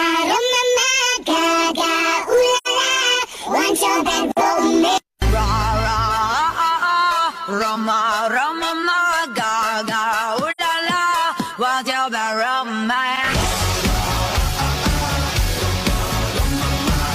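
AAC frame loss with muting occurs at 2.57 to 2.67 s and again at 10.51 to 10.61 s. Each time the decoder had no data for about 85 ms, which points to two consecutive frames lost, and filled the gap with a zeroed spectrum. Because the decoder's overlapping windows taper into and out of that silence, the sound fades down over roughly a frame, drops out, then fades back, leaving a soft-edged hole.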